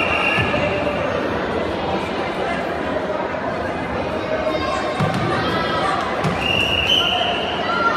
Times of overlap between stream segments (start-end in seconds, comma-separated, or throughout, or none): 2.35